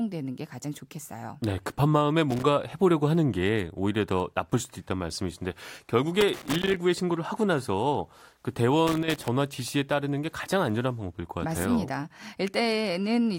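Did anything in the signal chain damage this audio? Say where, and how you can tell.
Yes: loose connector crackle in the analogue wiring, in three bursts at 2.31 to 2.43 s, 6.21 to 6.76 s and 8.87 to 9.28 s. A worn or dirty contact is making and breaking as it shifts, chopping the speech on and off. On a waveform the bursts show as ragged dropouts with sharp spikes. On a spectrogram they are irregular vertical streaks spanning the whole frequency range.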